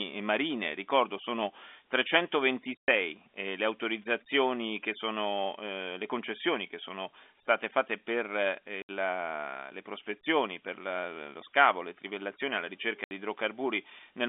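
At 2.80 s, just before "le autorizzazioni che sono", a 110 ms gap of packet loss filled with silence cuts the speech. Further 70 ms holes follow at 8.82 s and 13.04 s, after "sono state fatte per" and "scavo le trivellazioni alla". The gap lengths are consistent with 10 ms packets, and each gap begins and ends abruptly.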